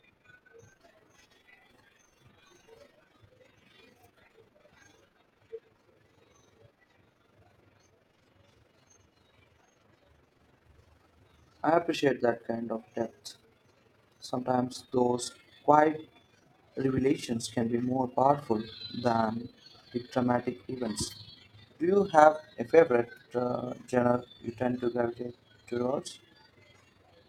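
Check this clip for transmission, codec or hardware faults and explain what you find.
One fault runs through the whole recording: overlap-add ripple, present from start to finish. The speech was split into windowed frames and rebuilt with an overlap whose windows do not add up to a steady gain, so the level dips and swells once per frame, by about 6 dB at a rate of around 20 times a second. That periodic gain wobble rides on every syllable as a fast, rough flutter, giving the speech a rough tremolo.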